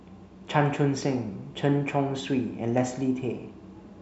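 No faults to report: nothing in the recording stands out as a technical problem at any point.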